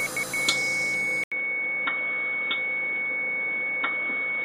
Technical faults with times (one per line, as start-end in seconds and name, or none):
1.24-4.45 input switched to a poorer device